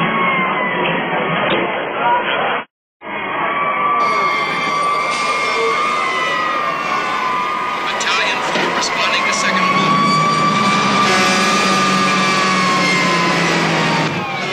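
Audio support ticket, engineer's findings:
Adaptive stream starting at a low bitrate, 0.0–4.0 s. Player opened on a low rung for fast startup, then switched up once throughput was measured. Nothing above 3.8 kHz: dull, band-limited, stronger codec smearing, consistent with a very low AAC rate near 16 kbit/s. At 4.0 s the treble returns and artefacts recede, sounding like roughly 96 kbit/s. Sudden step, no gap.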